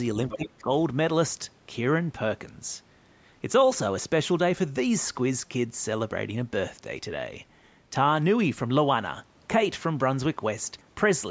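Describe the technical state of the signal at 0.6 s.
At 0.6 s, the echo canceller has likely failed to remove the far end played over the talker's loudspeaker. This is the other side's voice leaking through, from 0.29 to 0.62 s: a second voice sitting roughly 10 dB below the talker's speech.

Over the same moment, both sides are talking at once, and the canceller has likely turned everything down because it cannot tell the talker from the echo. This is speech suppressed in double talk, from 0.34 to 0.7 s. The talker's voice dips by as much as about 20 dB, affected across roughly a fifth of a second in total.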